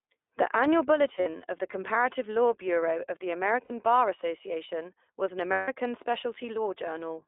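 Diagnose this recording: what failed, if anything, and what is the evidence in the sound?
iLBC codec, present for the whole clip: the speech sits in a telephone band of roughly 300 Hz to 3.6 kHz, with nothing above. There is a plainly audible rough, slightly synthetic edge on every syllable. This is a codec-stage fault. iLBC codes each frame's excitation on its own, and the texture fits its 20 ms frame mode at around 15.2 kbps. That coarse excitation model is what leaves the grain on the speech.

Lost iLBC frames, a network-stage fault, at 1.16 to 1.41 s, 3.64 to 3.72 s and 5.52 to 5.69 s. At each point the speech briefly turns into a held, buzzy, breathy vowel. The decoder is repeating the last pitch cycle mixed with noise to fill missing packets. The first event has 140 ms lost, scattered across 240 ms, with the longest run around 70 ms. The second has 60 ms lost, fitting three frames, and the third has 160 ms. 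Normal speech returns immediately after each gap.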